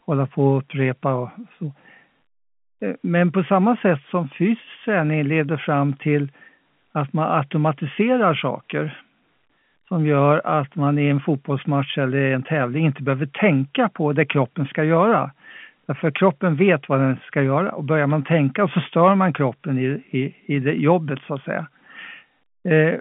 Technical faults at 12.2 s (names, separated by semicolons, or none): none